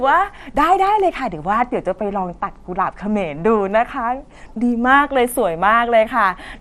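From the first moment to the end, the speech has a dull, gurgling, granular edge, and nothing at all comes through above 14.4 kHz. That's likely MP2 compression: Layer II divides the sound into 32 sub-bands and shares out bits among them, and when bits run short the top bands are switched off and the rest get coarsely quantised. Here that damage is plainly audible, which points to a low bitrate of around 80 kbps.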